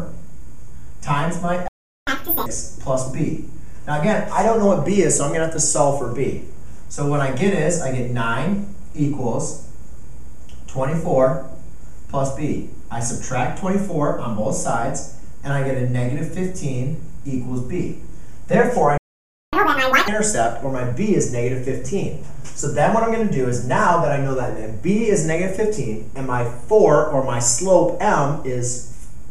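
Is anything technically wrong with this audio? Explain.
Yes, there are two playback stalls, each followed by a stretch of catch-up at higher speed.

Playback stall: the sound cuts to silence mid-flow from 1.68 to 2.07 s (about 0.39 s) and again from 18.98 to 19.53 s (about 0.55 s). The likely cause is the player running dry of buffered data or its thread being blocked, so output halted until it recovered.

Catch-up at higher speed: immediately after each gap, from 2.07 to 2.46 s and from 19.53 to 20.08 s, the audio plays at double speed and jumps close to an octave higher. The player resamples its backlog to recover the lost time, then returns to normal pitch and pace.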